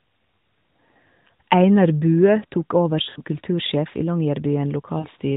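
Lost AMR speech frames at 3.10 to 3.21 s, right after "tok over", and at 5.00 to 5.07 s: the decoder stretches the last good pitch and tract shape with falling gain, giving a smeared, fading warble rather than a clean silent dropout.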